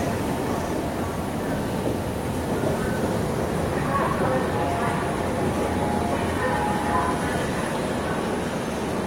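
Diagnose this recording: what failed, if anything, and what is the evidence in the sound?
It's a codec-stage fault: compressed frames skipped around 4.11 to 4.15 s. The sound jumps forward by about 70 ms where whole frames went missing or were rejected.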